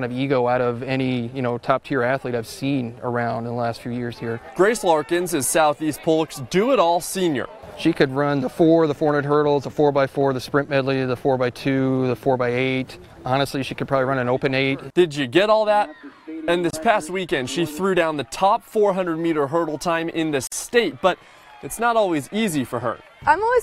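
Separately encoded pieces were joined without trimming encoder delay and end padding, leaving a gap at a join of encoded pieces at 16.70 to 16.73 s (about 29 ms) and 20.47 to 20.52 s (about 48 ms): brief dropouts with softened edges, the sound resuming where it stopped.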